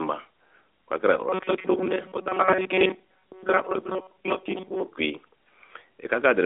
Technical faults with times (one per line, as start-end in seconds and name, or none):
1.29-4.88 robotic sound from repeated short buffers